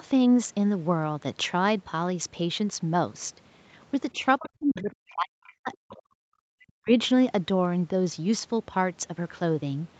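From 4.12 to 5.37 s the talker's speech dips in pieces, falling by around 40 dB at its deepest, for roughly a second in total. This is speech suppressed in double talk: both sides were likely talking at once, and the echo canceller turned down the talker along with the echo. Within that stretch, faint scraps of the other side's voice leak through at 4.44 to 4.49 s and 4.75 to 4.81 s, about 20 to 25 dB below the talker. Another scrap follows at 5.44 to 5.54 s, about 30 dB down. These likely come from loudspeaker playback that the echo canceller did not fully remove.

The talker is suppressed again from 5.56 to 6.18 s, for about half a second. During that gap a longer piece of the other side's voice leaks through from 5.73 to 6.02 s, about 25 dB down. A final dip of around 40 dB cuts into the talker from 6.57 to 6.92 s, again consistent with double-talk suppression.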